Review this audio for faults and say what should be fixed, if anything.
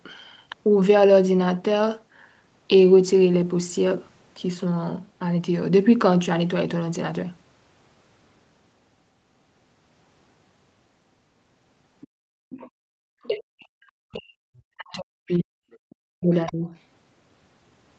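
Other side's voice leaking through, at 12.01 to 12.07 s, 12.5 to 12.7 s, 13.23 to 13.27 s, 15.72 to 15.77 s and 16.46 to 16.69 s: brief scraps of a second, quieter voice sit under the speech, roughly 20 to 35 dB below it, loudest in the last burst. The likely cause is loudspeaker playback reaching the microphone and the echo canceller leaving a residue. Using a headset, or giving the canceller a better-converged echo model, would keep the far end out of the pickup.

Background gated by the echo canceller, from 12.18 to 12.99 s: the room sound is pulled down sharply, by about 34 dB at its deepest, for most of that stretch, then comes back. While the loudspeaker was active, the canceller's suppressor treated the microphone signal as echo and closed it down, taking the ambience with it. Gentler suppression with comfort noise to fill the gap would keep the background steady.

Speech suppressed in double talk, from 13.27 to 16.69 s: the talker's own speech dips and breaks up over roughly 3 s in total, falling by around 40 dB at its worst. 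This is likely the canceller failing to tell near speech from far-end echo while both sides spoke, and attenuating everything. A double-talk detector that holds suppression back when the near talker is active would prevent it. The call microphone processing, with nothing above 8 kHz, is working normally.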